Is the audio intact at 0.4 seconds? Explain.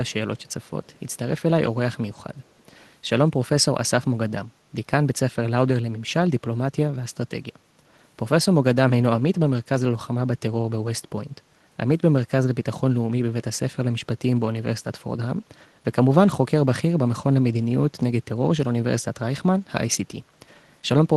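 No, not quite. From 0.4 to 0.5 s there's a short burst of what sounds like echo leak: a faint delayed copy of the speech, lagging by about 390 ms and sitting very low, roughly 40 dB under the direct voice. The likely cause is a far-end loudspeaker feeding its microphone, with the echo canceller letting a scrap through and sending it back. It comes across as a ghost of earlier speech, easy to miss.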